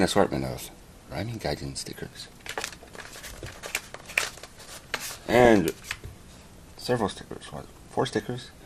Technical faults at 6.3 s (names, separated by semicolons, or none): MP2 compression